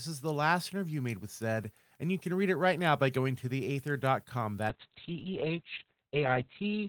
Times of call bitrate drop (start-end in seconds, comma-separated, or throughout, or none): 4.71-6.88